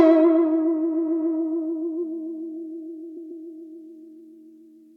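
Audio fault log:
0.93–1.35 s, repeated frames: a 139.3 ms block of the compressed music stream was written three extra times, so the decoder loops it into a stutter that adds 418 ms.
3.16–3.44 s, repeated frames: a block of the same 139.3 ms length, which fits a run of six frames, plays twice more, giving a shorter stutter that adds 278.6 ms.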